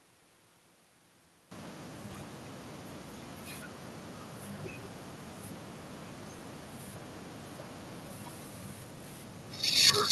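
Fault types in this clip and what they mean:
echo with no canceller: each phrase returns about 14 dB quieter, roughly a fifth of a second later, as a distinct repeat rather than reverb's smooth decaying tail.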